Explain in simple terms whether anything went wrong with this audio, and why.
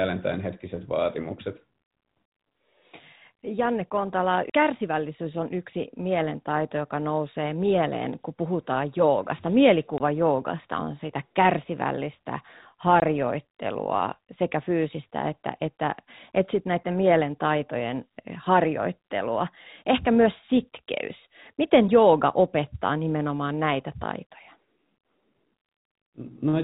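Two short gaps break up the speech. Both are packet loss filled with silence. At 9.98 s, right after "mieleen kun puhutaan joogasta", the sound drops out for 20 ms. It happens again at 13.0 s, also for 20 ms. Each gap fits one lost 20 ms packet. The receiver had nothing to play, so it played silence. The sound stops and starts abruptly. The telephone-style G.711 coding keeps the sound narrow, like a phone line.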